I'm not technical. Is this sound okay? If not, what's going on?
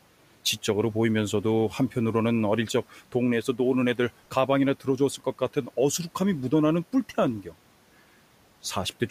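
No. Speech cut by the noise suppressor, between 5.18 and 5.69 seconds. The noise suppressor, which turns down background noise, mistook a soft part of the speech for noise. Altogether only about a tenth of a second of speech in that stretch was turned down along with the background, so it comes across as swallowed or faint. The quiet room noise in the recording belongs to the room itself and isn't a fault.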